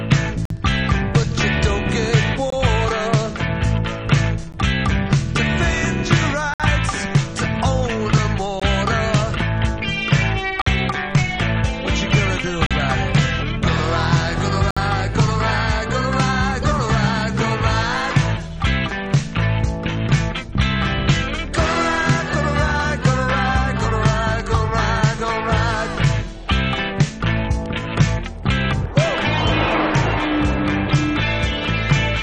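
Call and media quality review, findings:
Gap between stream segments: hard-edged dropouts to silence at 0.45, 2.50, 4.52, 6.54, 8.60, 10.62, 12.66 and 14.71 s, each 15 to 59 ms long. The roughly 2 s spacing points to 2 s segments in the streaming layer. Probable component is the player or packager: timestamps of adjacent segments leave a small hole that is filled with silence. No content missing, just time inserted at each boundary.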